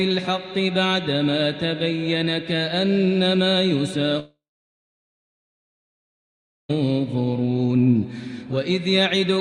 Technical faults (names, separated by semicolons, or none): long network dropout